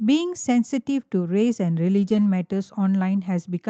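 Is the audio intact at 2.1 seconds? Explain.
No. From 1.97 to 2.23 s there is a lost packet rebuilt from error correction. Seven separate packets went missing, and the decoder filled about 140 ms of the gap with the lower-bitrate backup copy that Opus tucks into each following packet, which fits several separate losses. Nothing drops out, but that stretch of speech sounds coarser and noisier than the surrounding audio until full-quality frames resume.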